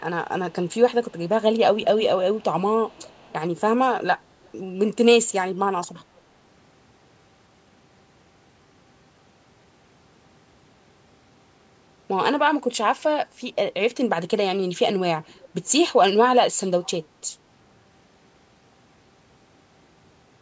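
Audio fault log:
0.50–0.75 s, 1.04–1.29 s, 1.77–2.44 s, 2.87–3.33 s, 4.43–4.50 s and 15.27–15.49 s: echo leak. A delayed copy of the speech trails the original by about 375 ms. Most scraps sit far down, about 30 to 35 dB below the speech. The one at 1.77–2.44 s is much louder, about 15 dB down. The likely cause is a loudspeaker on the far end, with its echo canceller letting part of the pickup return.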